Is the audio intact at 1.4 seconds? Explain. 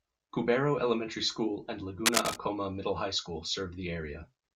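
Yes, at 1.4 seconds the speech is intact, with no audible technical fault at that moment.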